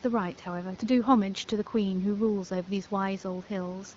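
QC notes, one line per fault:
No faults found; the room noise sits about 25 dB below the speech, and the AMR wideband (HD Voice) coding sounds consistent with a 12.65 kbit/s rate.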